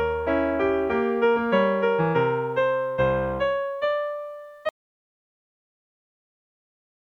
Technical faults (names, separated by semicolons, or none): audio dropout to silence